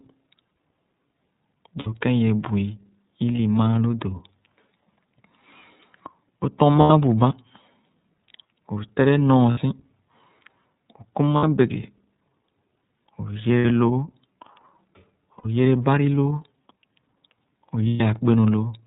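The iLBC codec colours the whole clip. The audio is band-limited to narrowband, with nothing above 4 kHz, and the speech has a plainly audible rough, synthetic edge. Each frame's excitation is coded on its own, a pattern that fits the codec's 13.33 kbps mode with 30 ms frames.

Lost iLBC frames cause brief dropouts at 1.79–1.87 s, 3.36–3.39 s, 6.81–6.91 s, 9.51–9.60 s, 11.37–11.43 s, 13.59–13.65 s, 15.38–15.46 s and 17.88–18.00 s, each lasting between 30 and 120 ms. The decoder fills every gap by repeating the last pitch cycle blended with noise, producing a held, faintly buzzy vowel that fades on the longer gaps. Normal speech returns almost immediately afterwards.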